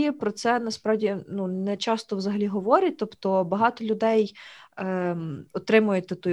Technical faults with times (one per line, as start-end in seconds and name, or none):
none